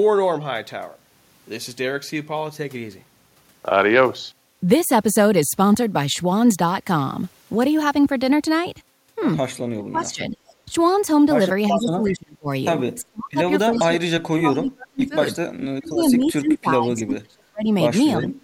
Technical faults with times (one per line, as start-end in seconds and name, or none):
9.73-10.73 speech suppressed in double talk
10.11-10.54 echo leak
11.70-18.39 speech suppressed in double talk
12.05-12.17 echo leak
13.77-13.81 echo leak
15.96-16.13 echo leak
18.22-18.28 echo leak